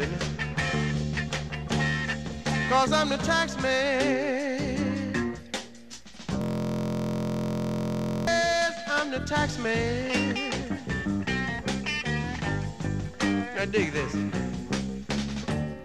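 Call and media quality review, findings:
System hang loop, 6.42–8.27 s: host or driver froze while hardware recycled its ring buffer, repeating one 23.22 ms slice about 80 times, a steady 43.1 Hz buzz; fits a 1024-sample buffer.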